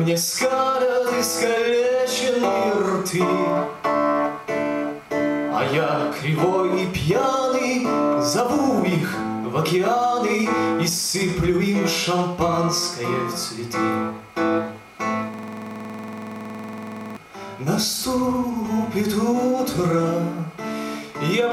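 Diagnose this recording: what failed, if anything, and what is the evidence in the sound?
A system hang loop at the driver or buffer stage. From 15.34 to 17.17 s, one 46.44 ms slice of sound repeats about forty times, a rhythmic stutter at 21.5 Hz, which fits a 2048-sample ring buffer replayed while the host stalled. Unlike network packet-loss concealment, which fades or varies its repeats, every cycle here is an identical copy with no decay, the same slice each time, ending when the system resumed.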